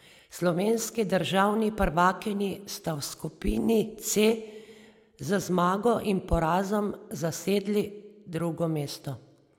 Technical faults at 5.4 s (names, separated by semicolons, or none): overlap between stream segments